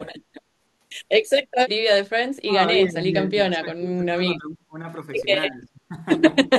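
An echo canceller that likely could not tell the near talker from the far side's loudspeaker echo, both active at once, turned the speech down, the classic speech suppressed in double talk. The speech dips by roughly 20 dB from 2.44 to 2.65 s, then through a long stretch from 2.84 to 4.78 s, eases down by roughly 15 dB from 5.5 to 5.96 s, and drops hardest, roughly 30 dB, from 6.44 to 6.56 s.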